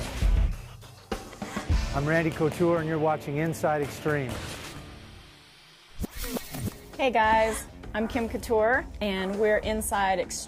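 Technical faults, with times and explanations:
No technical faults can be heard in this clip.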